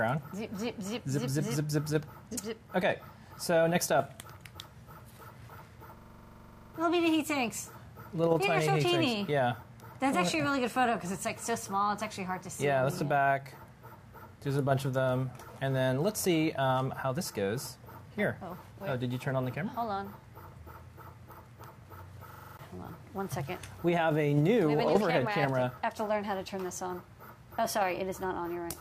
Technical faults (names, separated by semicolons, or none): system hang loop